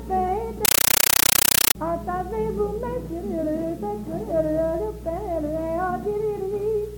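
From 0.65 to 1.75 s the sound is replaced by very loud, chattering static, the mark of a compressed stream played as audio. An AC-3 (Dolby Digital) bitstream, apparently a 448 kbps one, has been taken as ordinary samples rather than decoded. Each frame comes out as a 9.33 ms noise burst followed by silent padding, repeating at 31.25 Hz. That steady buzzing rhythm sets it apart from plain broadband noise or a dropout, which have no fixed frame rate.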